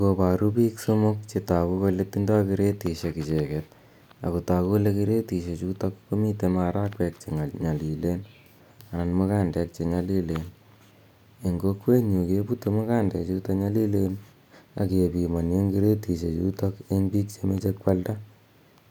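Dropped samples at 11.99 s produce a single sharp click in this speech recording, showing on a spectrogram as a thin vertical line across all frequencies. The likely cause is a handful of samples, well under a millisecond's worth, going missing from the stream, so the waveform leaps straight from one value to a later one. That step is far too brief to remove any audible sound, but the abrupt discontinuity itself is what the ear catches as the click.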